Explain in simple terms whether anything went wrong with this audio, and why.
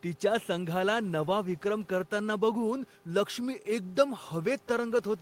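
Nothing went wrong with the signal, and the only extra sound is a faint background noise from the room where the microphone was, sitting well below the speech and belonging to the recording itself rather than to any problem with the equipment.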